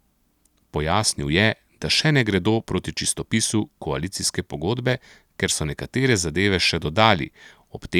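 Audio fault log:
No fault is heard in this speech clip.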